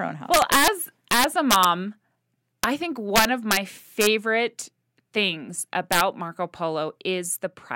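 A gain stage pushes loud speech past the integer limit by about 1 to 8 dB, and samples wrap to the opposite sign instead of clamping. This integer overflow cracks violently, far harsher than clipping, at 0.34–0.68, 1.11–1.65, 2.64, 3.16–3.57, 4.01–4.07 and 5.92–6.01 s.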